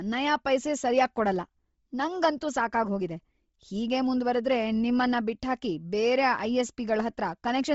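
Throughout the speech, the highs sound breathy and grainy, with hiss where clean detail should be and nothing above 7.7 kHz. The likely cause is heavy Bluetooth LC3 compression. That fits a low bitrate near 24 kbps, with upper frequencies zeroed and refilled with noise.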